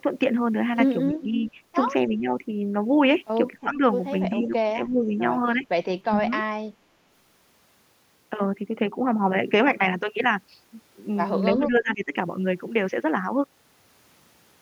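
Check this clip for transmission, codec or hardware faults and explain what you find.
The speech dips in level eight times, at 1.08 to 1.34 s, 1.52 to 1.57 s, 2.08 to 2.27 s, 3.59 to 3.82 s, 4.34 to 5.22 s, 5.55 to 5.65 s, 6.05 to 6.33 s and 11.52 to 12.14 s. These dips are likely speech suppressed in double talk: an echo canceller mistook the talker for loudspeaker echo while the far side spoke, and attenuated both. Drops range from a slight few decibels to roughly 25 dB.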